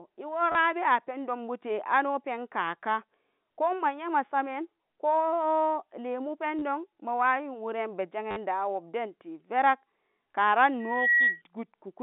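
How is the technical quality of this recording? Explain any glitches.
The telephone-band speech carries two kinds of fault: short repeated-packet stutters and a feedback squeal near the end.

Packet loss with last packet repeated occurs at 0.52 s (just before "abewa pendonbute ano penkaka"), 6.59 s (after "nyema samen ko lemu") and 8.31 s, lasting 30, 30 and 50 ms. The receiver replays the last audio chunk, which fits 10 ms packets, giving a buzzy stutter, not a silent gap.

A loudspeaker feedback squeal runs from 10.80 to 11.42 s: a 1.9 kHz tone swells over about a third of a second to about 5 dB above the speech, rising on its own rather than starting at full level.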